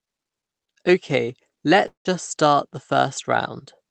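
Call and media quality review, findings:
Long network dropout, 1.87–2.08 s: speech smears into a fading buzz, then 120 ms silence; 180 ms lost on resumption. Likely packet loss outlasting Opus concealment.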